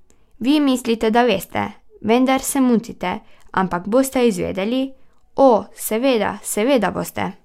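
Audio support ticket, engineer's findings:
No faults found in the speech audio on review.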